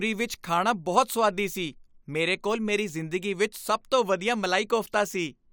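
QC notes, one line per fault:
No technical faults are audible, with steady level, unbroken continuity and consistent frequency balance across the whole of the speech.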